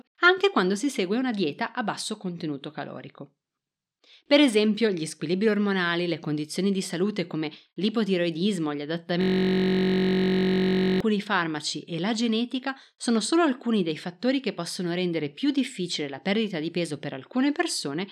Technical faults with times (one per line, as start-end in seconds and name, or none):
9.21-11.00 system hang loop